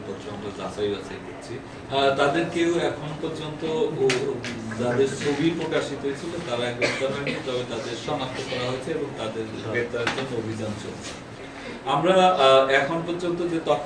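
No technical faults can be heard anywhere here.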